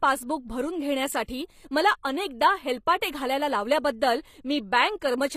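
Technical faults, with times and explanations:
throughout HE-AAC compression: the speech is likely coded with HE-AAC at a low bitrate, which fits about 24 kbps. The treble is rebuilt by copying lower bands upward, so the top end sounds gritty and lispy rather than natural, with nothing above 15.5 kHz.
1.26–1.29 s pre-echo: after "पासबुक भरून" and before "मला अनेकदा", the codec spread quantisation noise across its whole block, so a sharp attack arriving late was preceded by about 22 ms of short hiss and sounds softened and smeared.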